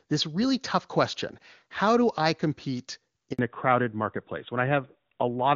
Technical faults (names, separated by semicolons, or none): handover gap; fallback to narrowband